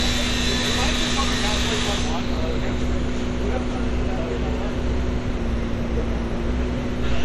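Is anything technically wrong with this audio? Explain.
Yes. Throughout, the sound has a watery, swirling texture with metallic chirps on bright transients, and nothing reaches above 18.5 kHz. The likely cause is MP3 compression, at a level that fits a bitrate around 64 kbps. Short of bits, the encoder drops the top band and switches weak frequency lines on and off between frames. A plain low-pass filter would only dull the top without this flickering.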